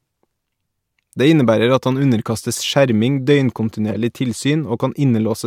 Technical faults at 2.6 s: corrupt frame decoded

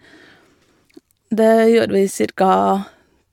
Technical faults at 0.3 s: none

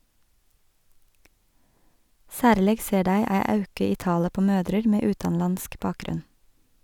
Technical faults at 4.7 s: none

